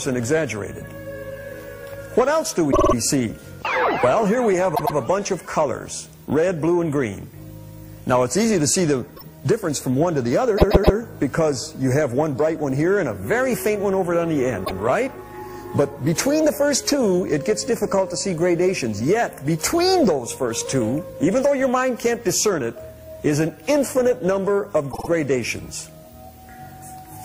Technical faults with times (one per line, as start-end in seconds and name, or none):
2.71-2.93 repeated frames
4.74-4.95 repeated frames
9.16-9.24 repeated frames
10.57-10.96 repeated frames
14.64-14.77 repeated frames
24.91-25.08 repeated frames